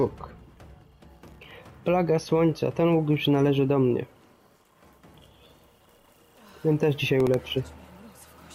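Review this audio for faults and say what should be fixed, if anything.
There's processor overload crackle in two bursts, from 1.15 to 1.51 s and from 7.20 to 7.47 s. The processor kept missing deadlines on tiny buffers, each well under a millisecond, and replayed stale audio with hard edges. The first burst has roughly twenty misses; the second has just a handful. A larger buffer or less processing load should stop it.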